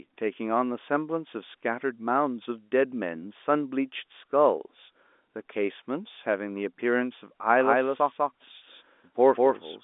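A slower second path likely re-captures the speech from 7.6 s onward: a doubled audio track, its equally loud copy trailing by about 200 ms.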